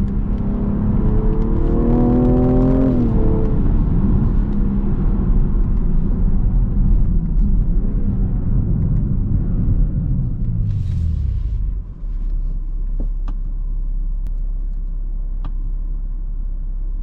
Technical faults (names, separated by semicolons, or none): hard clipping